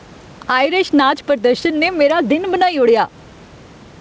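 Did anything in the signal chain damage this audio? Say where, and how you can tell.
Yes, at the input stage: gain pumping throughout, with the gain swinging roughly 10 dB, likely overdriven mic gain feeding a fast limiter.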